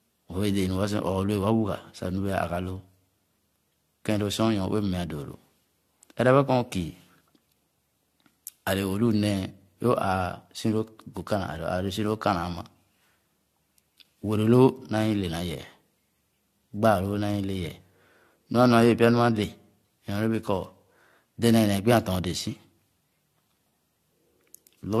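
From start to finish the speech carries generation loss, likely from being passed through a lossy codec around five times. Each re-encode quantised the audio again on a shifted frame grid, so the damage piled up into swirling, hollow smearing and blurred consonant attacks, with nothing above 14.4 kHz. That ceiling fits AAC-LC at about 64 kbit/s, yet the degradation is heavier than a single encode at that rate would produce.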